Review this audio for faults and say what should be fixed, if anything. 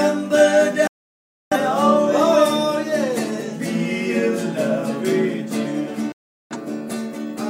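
Digital broadcast dropouts at 0.87–1.57 s and 6.12–6.56 s: the receiver lost good frames and muted within 3 ms, leaving flat waveform gaps and blank spectrogram columns. Stronger reception or error protection prevents this.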